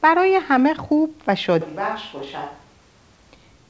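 From 1.61 s to 3.32 s the speech turns suddenly roomy and hollow, thinner in the bass and roughly 10 dB quieter, likely a switch to a distant microphone. The waveform shrinks abruptly, and the spectrogram shows weaker low end and a raised noise floor beneath the 8 kHz ceiling.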